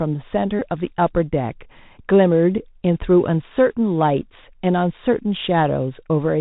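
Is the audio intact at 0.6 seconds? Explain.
No. From 0.59 to 0.62 s there is a Bluetooth headset packet repeat. Voice packets between headset and phone were lost for about 19 ms, which fits five consecutive packets, and the chip kept decoding the last good packet's bits. Each repeat is 3.75 ms long, so the gap becomes a brief, steady buzz near 267 Hz instead of a silent hole or a click. That periodic tone is what sets it apart from a plain dropout, which would leave a gap, and from a single repeat, which would be only a small tick.

Underneath, the Bluetooth CVSD headset codec runs through this moment as it does through the whole clip. Its one-bit up-or-down coding at 64 kbps passes nothing above 4 kHz, which accounts for the narrowband, muffled quality. The coding leaves a granular hiss beneath the speech and roughens sharp s sounds. Unlike the packet repeat, this damage is constant and carries no pitched buzz.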